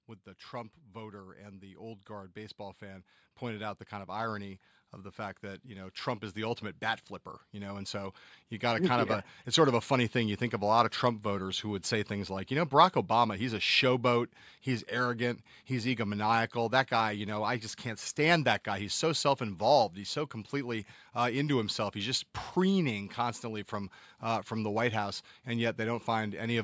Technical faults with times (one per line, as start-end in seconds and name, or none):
0.05-12.43 automatic gain rising